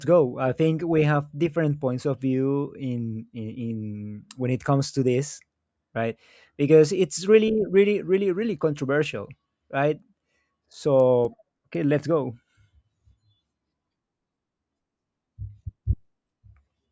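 Regular soft ticks run through the speech from 9.0 to 12.75 s, four per second, and they sit on the sound itself rather than in the gaps. The pattern is a resampler restarted on every block. Each 250 ms block was converted in isolation, so the filter lacked its true neighbouring samples at every block edge and left a small error there. The conversion fits a change from 44.1 kHz down to 16 kHz.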